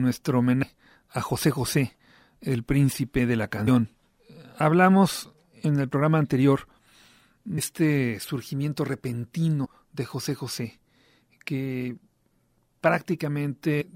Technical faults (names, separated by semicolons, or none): damaged data in a compressed stream